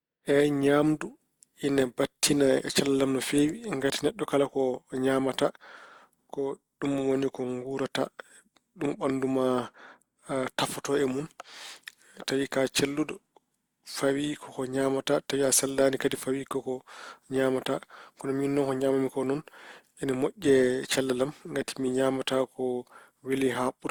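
Right through the speech there's generation loss: a swirly, hollow smear and blurred attacks, likely from around four passes through Opus, each sounding near 64 kbit/s.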